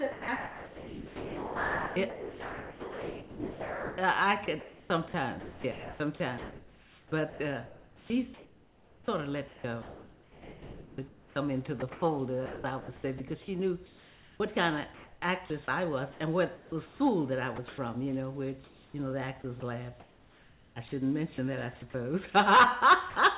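From 0.12 to 13.2 s, the sound is chopped by the voice detector, likely because the sender's detector kept toggling transmission. About 8.6 s of it gives way to comfort noise. Further chopped stretches follow at 13.86–17.0 s, 17.56–17.78 s, 18.64–20.76 s and 21.34–21.94 s.

At 23.1–23.16 s, the sound is dropped by the voice detector, likely because it mistook a quiet tail for background. About 50 ms vanishes under steady comfort noise. The call band is narrow, limited to 4 kHz.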